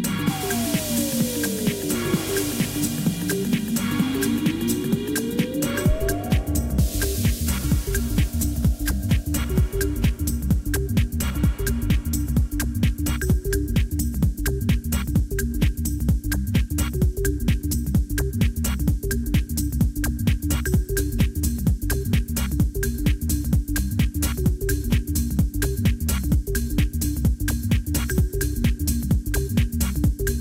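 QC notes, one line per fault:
No technical faults heard in this audio.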